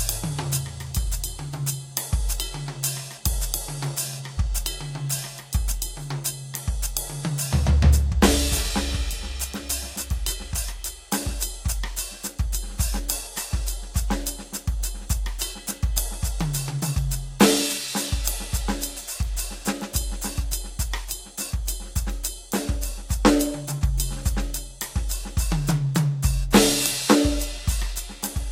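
Music, with no technical faults.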